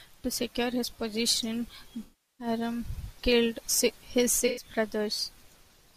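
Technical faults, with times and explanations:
throughout: sample clock jitter. The converter's clock wanders by a couple of microseconds, so each sample is taken slightly early or late. The error scales with how fast the waveform is changing, so it sits about 30 dB below the speech and rides along with it as a fine hiss or roughness. It is strongest on loud passages and sibilant, high-frequency sounds, and it drops away in the pauses between phrases.
2.03–2.47 s and 4.46–4.65 s: AAC frame loss with concealment. After "secure his position", about 0.36 s of the stream is missing, which fits roughly 17 lost frames. After "killed his", about 0.11 s is missing, which fits about 5 frames. In both gaps the decoder rebuilds the audio by repeating the last good spectrum with altered phase and estimated energy. The result is a smeared, noisy, phasey stretch in place of clean speech.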